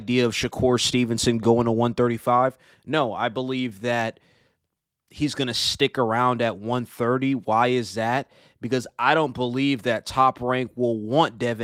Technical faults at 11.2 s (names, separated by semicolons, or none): none